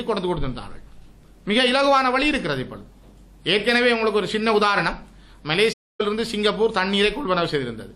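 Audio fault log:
5.72–6.01 s, AAC frame loss with muting: the sound fades out and back in around a hole of roughly 0.28 s, a span that fits about thirteen consecutive frames the decoder had no data for and replaced with silence. Overlapping windows soften both edges. On a waveform the envelope tapers smoothly to a flat line and tapers back up. On a spectrogram, every frequency band goes dark together for that interval.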